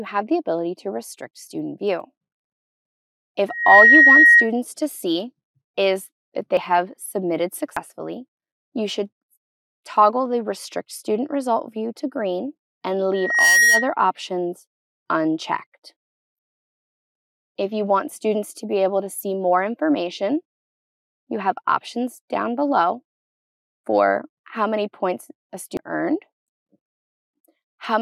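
From 3.48 to 4.50 s a microphone is picking up the loudspeaker it drives, and the loop gain passes unity at 1.9 kHz. This loudspeaker feedback squeal swells over about a third of a second to around 10 dB above the audio, and it returns from 13.13 to 13.94 s. At 6.57, 7.77 and 25.77 s the program likely failed to collect its samples in time, a dropped buffer (overrun). Each is an abrupt skip forward: about a tenth of a second is lost at the first two and somewhat more at the last.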